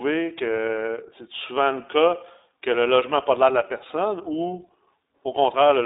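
Speech that sounds thin, boxed-in and rough throughout, with nothing above 3.7 kHz and little below 250 Hz, is the mark of the iLBC codec. It codes each short frame independently, here consistent with 20 ms frames and the 15.2 kbps mode, leaving plainly audible synthetic roughness.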